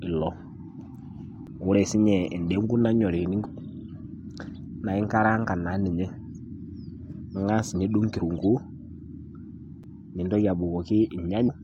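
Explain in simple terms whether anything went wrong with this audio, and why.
Two brief blocks of digital silence cut the speech at 1.47 s (8 ms) and 9.83 s (about 5 ms, which fits a 256-sample block): the output buffer likely wasn't filled in time, leaving ticks.

Damaged data in a compressed stream causes short glitches at 3.44–3.46 s, 8.18–8.20 s and 11.47–11.50 s, where corrupted frames made the decoder lose its place.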